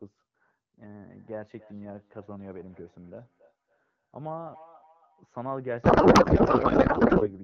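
From 0.78 to 5.31 s there is feedback echo between two devices. Each phrase returns roughly every third of a second, thinner each pass, peaking about 20 dB below the speech.

From 5.83 to 7.30 s a codec payload misread takes over. Octet-aligned AMR frames are decoded as bandwidth-efficient, so the speech turns into garbled noise and warble.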